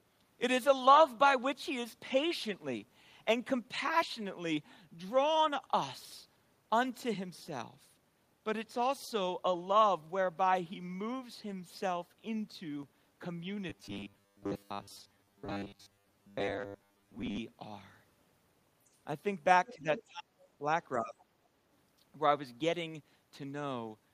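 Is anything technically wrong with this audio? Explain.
Yes, three kinds of fault are audible, all in the second half of the speech.

From 13.70 to 17.38 s there is robotic sound from repeated short buffers: the voice becomes a rigid metallic buzz near 100 Hz, loosely tracking the speech. The likely cause is audio arriving too late, so the software repeats roughly 10 ms slices in place of most of the real signal.

The other side's voice leaks through in brief scraps at 18.93 to 18.97 s, 19.66 to 19.74 s, 19.96 to 20.02 s and 21.19 to 21.24 s. They range from around 40 dB down to around 15 dB below the talker. This is likely loudspeaker sound that the echo canceller failed to remove from the microphone.

Speech is also suppressed in double talk at 19.74 to 19.87 s, 20.10 to 20.23 s, 20.60 to 20.65 s and 20.96 to 21.15 s. In each, the talker's level dips briefly, by up to about 15 dB. The likely cause is the echo canceller ducking everything while both sides overlap.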